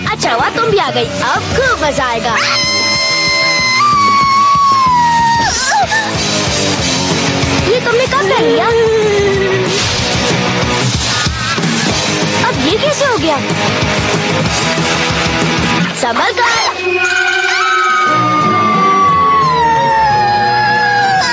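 All the way through, the gain gets pulled down each time a loud sound comes in, with a swing of roughly 5 dB. That's gain pumping, likely from the input gain being set far too high and a fast limiter or compressor clamping down on every peak. Loud and soft moments end up squashed together, and there's the call-style band limit, with nothing above 8 kHz.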